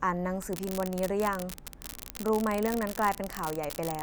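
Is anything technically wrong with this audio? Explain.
Yes. From 0.42 s to the end of the clip there is an unreliable data bit: one line of the digital word is marginal, so in a random share of samples that bit flips, adding or removing a step of about −16 dBFS. Each error is an identical spike, heard as a constant crackling fizz under the speech that continues through pauses. A waveform shows scattered equal-height spikes; a spectrogram shows broadband speckle filling every gap.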